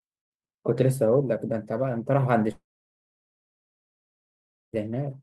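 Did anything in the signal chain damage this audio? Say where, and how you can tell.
Yes. A long network dropout runs from 2.51 s to 4.75 s, most likely in the network stage. The speech is cut off, then a short decaying buzz extends the last sound before it falls away into about 2.1 s of near silence. Audio resumes at 4.75 s with no overlap, meaning about 2.2 s of speech never arrived and the receiver's concealment filled the gap rather than the talker pausing.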